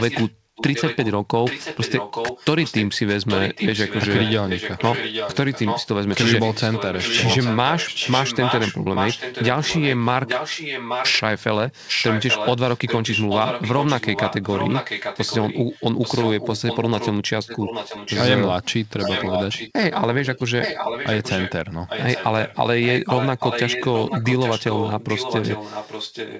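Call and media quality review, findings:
Echo leak: far-end echo canceller likely failing to remove loudspeaker pickup, returning a copy of the speech about 0.83 s late, roughly 5 to 10 dB below it. Heard at 0–1.12, 1.44–11.21, 11.87–17.12, 17.46–18.23, 18.98–21.52 and 21.87 s to end.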